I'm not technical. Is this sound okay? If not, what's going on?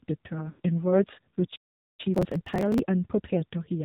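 No. AMR narrowband mobile codec, throughout: the whole clip has passed through an old-style mobile phone speech codec. It keeps nothing above 4 kHz and rebuilds the voice from a rough model, so the speech sounds muffled, buzzy and noticeably synthetic from start to finish.

Lost AMR speech frames, 0.50 to 0.60 s: about 100 ms of speech data was corrupted on the way. The decoder filled the gap by stretching out the last good sound while fading it down, so the voice smears and sags briefly before recovering, weak or rough for a moment.

Playback stall, 1.56 to 2.00 s: the sound cuts off mid-flow for about 0.44 s of silence. The player most likely ran out of incoming audio or was held up, and could only resume once fresh data arrived.

Time-compressed catch-up, 2.00 to 3.83 s: to make up the lost time, the player snips out small pieces and blends the joins. Speech runs about 1.15 times faster than normal while keeping its pitch, so it sounds hurried.

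Processor overload crackle, 2.15 to 2.79 s: dozens of tiny slices of audio were skipped because the device couldn't keep up, which fits buffers of around 5 ms. Each skip is a small hard-edged gap, heard together as gritty crackling over the voice.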